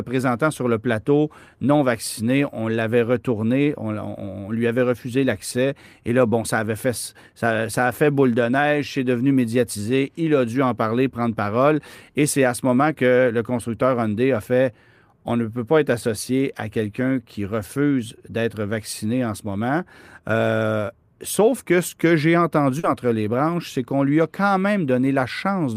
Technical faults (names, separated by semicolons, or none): short concealed packet loss